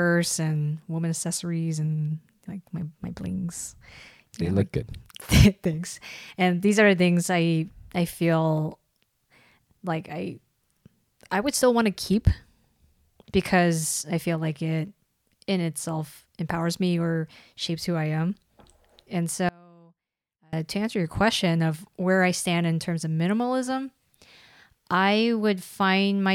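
An audio dropout to a faint residue runs from 19.49 to 20.53 s, just before "to answer your question". For about 1.04 s the speech cuts out abruptly, with no fade, leaving only a faint leak of the signal roughly 30 dB below its normal level, then snaps back mid-flow. The likely cause is a brief loss of the wanted signal upstream while the path after the break stayed live, carrying only that low residue.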